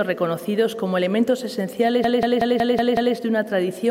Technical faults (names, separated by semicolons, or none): system hang loop